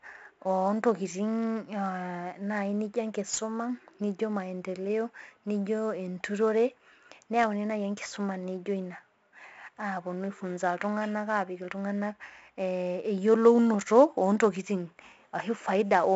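Throughout the speech, the audio has passed through 4-bit ADPCM compression. Each sample is coded as a coarse step from a prediction, so a gritty hiss rides on every loud sound and sharp attacks distort. Nothing reaches above about 7.7 kHz, consistent with a 64 kbps stream at a 16 kHz sample rate, leaving the speech dull.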